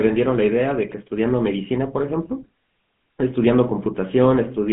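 Throughout, the speech went through a GSM full-rate codec, consistent with a 13 kbps link, which rebuilds the voice from a coarse vocal-tract model and sparse pulse excitation. The result is a plainly audible buzzy, gravelly roughness, squeezed into a 150 Hz to 3.5 kHz band with nothing above 3.8 kHz.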